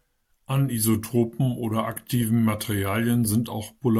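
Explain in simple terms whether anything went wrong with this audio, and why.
Nothing went wrong here.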